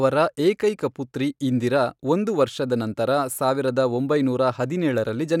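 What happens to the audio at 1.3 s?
At 1.3 s the speech carries on intact, with no dropout, click, distortion or other fault at that moment.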